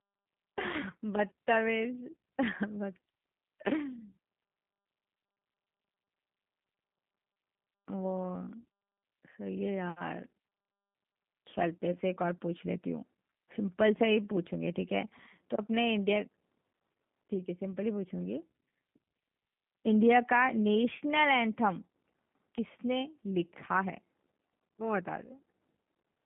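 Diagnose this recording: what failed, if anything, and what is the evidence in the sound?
Codec stage: the speech carries G.729 codec damage throughout, heard as rough, slightly synthetic speech limited to 150 Hz to 3.5 kHz. A spectrogram shows a flat ceiling near 3.5 kHz and blurred harmonics, consistent with an 8 kbit/s coder rebuilding speech from a filter, pitch predictor and sparse pulses.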